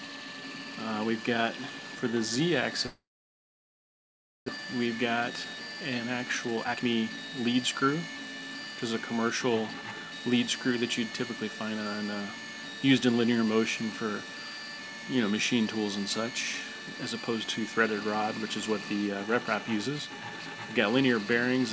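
From 2.86 s to 4.50 s the sound stops: a fading buzz or hiss leads into about 1.45 s of silence, and a full second of audio never returns. This is likely a long network dropout, with the audio arriving around 0.7 s later than before.

From 4.57 s to 7.88 s the audio runs hurried at unchanged pitch, about 118% speed. This is a jitter buffer speed-up. The receiver repeatedly removed pitch-period slices, roughly 0.7 s in total, to drain the backlog, over a band that ends at 8 kHz.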